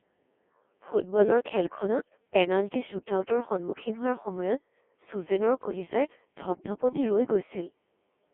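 Throughout, the speech has passed through a Codec 2 vocoder, likely at a 1.6 kbit/s mode, that rebuilds it from pitch and spectral parameters inside a 250 Hz to 3.4 kHz band, leaving it heavily robotic and buzzy. From 1.98 to 2.10 s, just before "পেনাল্টি শ্বুটআউটৰ সন্মুখীন", bit errors on digital voice radio corrupt roughly one bit in twenty, and three frames are hit. The synthetic sound jumps in pitch and level and breaks into a short warbling burst.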